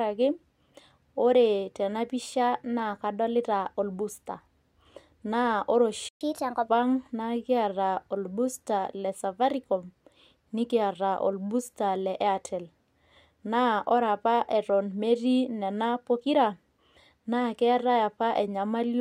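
Speech runs normally until a playback stall at 6.09 s, where the audio cuts out mid-flow for about 120 ms. On a waveform this is a flat line of digital silence through 6.21 s, and on a spectrogram a clean vertical gap across all frequencies, with sharp edges on both sides. The cause is likely the player running dry of buffered data or its playback thread being blocked, so nothing reaches the output until it recovers. Immediately afterwards, from 6.21 s to 6.69 s, comes a catch-up at higher speed. The player resamples its backlog to run 1.25 times faster, so for about half a second the speech is audibly hurried and raised by roughly four semitones, giving a brief chipmunk quality before everything snaps back to normal rate and pitch. A spectrogram shows the harmonics and formants shifted upward and the syllable patterns compressed in time across that stretch. The waveform shows correspondingly tighter spacing of pitch periods and syllable envelopes until 6.69 s.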